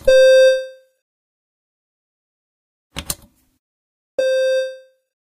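A sudden gain jump occurs at 1.17 s. The level drops by about 8 dB between two adjacent samples and stays there to the end, with no fade. The sound and its background noise fall together, so the whole texture abruptly becomes quieter rather than any single element receding. The likely cause is a digital gain setting or bit shift applied instantly instead of being ramped over time.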